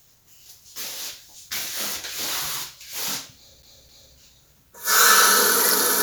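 From 3.62 to 4.15 s the playback sticks on one turn of a CD: a scratch throws the laser back, so a 261 ms slice repeats twice with brief mutes between.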